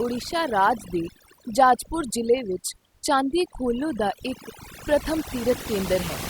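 The clip is speech with overdone noise removal throughout. The pauses drop to near silence, dotted with twinkling specks. A noise reduction stage set too hard is cutting frequency bands near its noise estimate, and quieter parts of the voice go with them.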